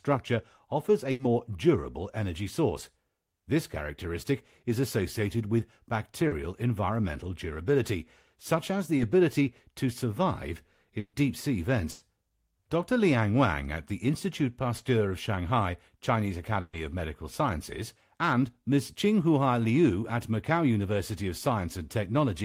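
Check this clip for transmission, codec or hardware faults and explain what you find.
The clip has transmission faults: seven packet-loss events, four long and three short, all in the speech path.

Burst of packet loss at 1.11 to 1.21 s, 10.99 to 11.15 s, 11.91 to 12.03 s and 16.61 to 16.75 s: runs of packets were lost or arrived too late to play, losing between 80 and 140 ms of speech each time. The receiver extended the last sound and faded it, giving a held buzz or fading hiss before speech jumps ahead. At 10.99 s the fill decays into about 50 ms of silence.

Short concealed packet loss at 6.27 to 6.33 s, 8.97 to 9.01 s and 14.77 to 14.81 s: 20 to 40 ms of audio never reached the decoder in time. The receiver extrapolated the preceding sound and crossfaded back into real audio, producing a brief smear or wobble.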